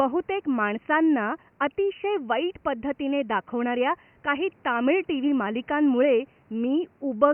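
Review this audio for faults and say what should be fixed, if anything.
Nothing here needs fixing, as no technical fault can be heard in the speech. The room noise sits about 36 dB below the speech, a quiet part of the recording itself rather than a fault of the system.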